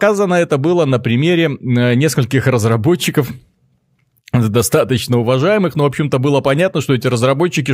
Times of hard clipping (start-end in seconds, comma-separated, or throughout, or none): 2.37-2.74, 3.18